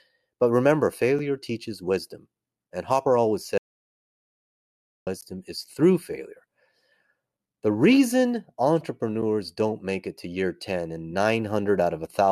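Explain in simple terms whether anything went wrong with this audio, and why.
Two short, hard-edged silent holes break the speech at 1.19 s, just before "teaches wisdom", and at 5.21 s, just before "is through". This is a gap between stream segments: the audio arrives in 4-second pieces whose timings don't quite join, so the player fills 6 ms and then 14 ms with silence. Nothing is lost.

From 3.58 to 5.07 s the sound cuts off into dead silence, with no room noise, until "is through". This is an audio dropout to silence. The input was likely lost, and silence was written instead, so about 1.5 seconds of speech is gone.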